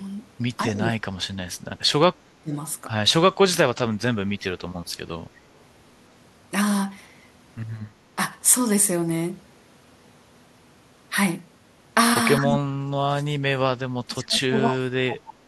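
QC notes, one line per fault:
0.64–1.5 s, 2.18–2.53 s, 4.34–4.62 s: speech suppressed in double talk. The level dips by up to about 30 dB in chunks, likely because the echo canceller mistook overlapping far-end speech for echo and attenuated both.
12.4–12.63 s, 12.8–12.94 s, 13.18–15.46 s: speech suppressed in double talk. The two brief dips reach about 15 dB, then a sustained two-second pull-down of up to about 35 dB lasts to the end.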